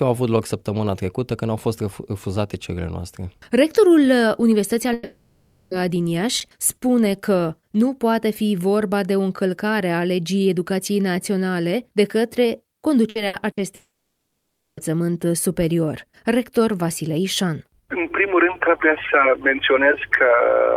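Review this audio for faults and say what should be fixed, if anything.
A long network dropout is likely at 4.93–5.74 s and 13.75–14.80 s. About 0.78 s and 1.02 s of audio never arrive. The first gap is fully bridged by a fading held tone. The second decays to roughly 0.77 s of flat silence. On a spectrogram each shows smeared horizontal streaks, with the second ending in a blank band. Fix: use a jitter buffer with retransmission or forward error correction, and a more stable network path.

Loose connector crackle occurs at 6.39–6.54 s, an irregular burst of scratching about 0.15 s long. A contact making and breaking chops the signal. The waveform shows jagged spikes and dropouts, and the spectrogram shows scattered vertical broadband lines. Fix: reseat, clean or replace the cable and connector, and secure it against movement.

A burst of packet loss repeats three times: 13.09–13.18 s, 13.27–13.36 s and 13.51–13.60 s, each losing about 60 ms. 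The receiver holds and fades the last sound, so a brief buzz or hiss replaces the missing audio. Each appears as a short smeared patch on the spectrogram. Fix: add forward error correction and a larger jitter buffer.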